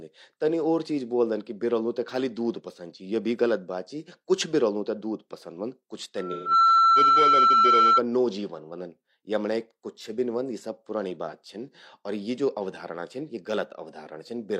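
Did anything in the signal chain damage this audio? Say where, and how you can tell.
Yes. Loudspeaker feedback squeal from the mic-to-speaker loop at 6.17 to 8.03 s: a 1.3 kHz tone swells over about 0.4 s to roughly 10 dB above speech. It shows as a bright horizontal spectrogram line.

AAC frame loss with concealment in the codec: from 6.32 to 6.51 s, 128 ms sounds smeared and phasey, which fits three frames rebuilt from earlier spectra. It appears as a blurred, repeated spectrogram patch.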